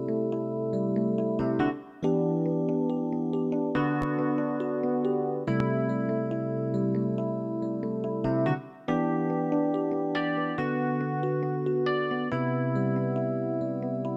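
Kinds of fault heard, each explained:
Loud pop: a brief, sharp transient laid over the audio, which continues underneath without interruption. Two single pops occur, at 4.02–4.05 s and 5.60–5.63 s, each lasting about 30 ms. The first rises a little above the surrounding level; the second is much stronger, standing well clear of the signal. The cause is likely a sudden voltage step or pulse, from a plug, switch, static discharge or driver glitch, shaped by the following circuitry.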